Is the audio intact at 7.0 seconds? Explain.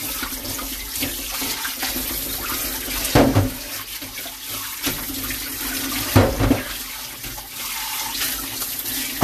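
Yes, at 7.0 seconds the sound is intact, with no dropout, click, distortion or other fault at that moment.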